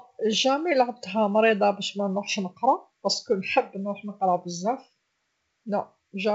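Nothing faulty is heard in this G.722 wideband speech.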